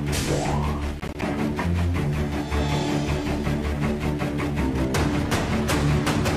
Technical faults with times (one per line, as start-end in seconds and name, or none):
1.00-1.23 processor overload crackle